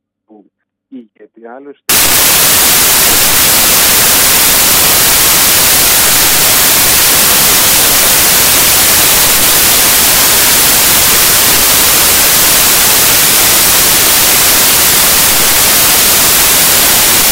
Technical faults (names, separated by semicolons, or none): samples built from the wrong bytes